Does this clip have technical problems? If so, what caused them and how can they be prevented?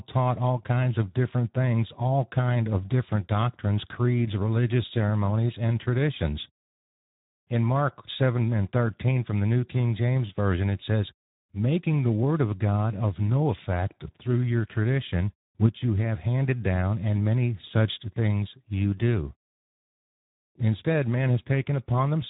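Yes. Speex codec damage runs through the whole clip. The speech sounds noisy and hoarse, as the CELP coder has too few bits to model the excitation that drives each short speech segment. The coarseness points to a low setting of about 11 kbps. Nothing is present above 3.8 kHz, so the band past that edge is missing and the speech sounds narrow. To prevent this, record or transmit with a higher Speex quality setting or a modern wideband codec such as Opus.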